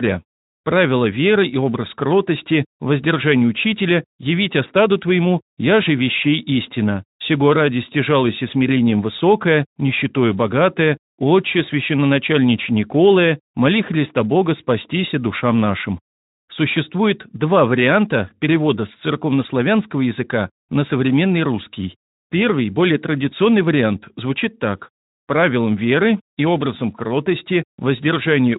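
No faults are present in the speech; the slight coding texture is the codec running as intended at its normal setting.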